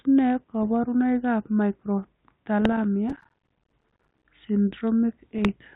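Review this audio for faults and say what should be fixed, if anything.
Bit errors on an ADPCM link occur at 0.63–0.67 s, 2.61–2.78 s and 5.38–5.48 s, heard as pops and short rough bursts with brief level jumps. Each flipped bit corrupts the decoder's step size and predictor, so the damage rings on for several milliseconds. The sparse, short bursts point to a low error rate, on the order of a couple of errors per thousand bits. Add error protection or concealment on the link and improve the radio margin.

Processor overload crackle runs from 3.10 to 4.25 s as a continuous gritty tearing over the speech. The processor missed deadlines again and again, and each missed buffer was filled with silence, leaving a hard-edged dropout about every 11 ms on average. The rhythm fits buffers of around 5 ms, with roughly a hundred missed over the stretch. Enlarge the audio buffer or reduce competing load so every buffer finishes on time.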